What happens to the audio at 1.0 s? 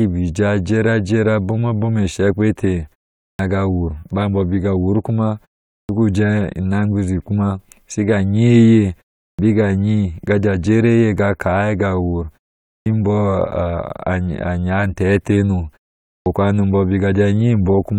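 At 1.0 s the speech comes through intact, with no fault at that moment.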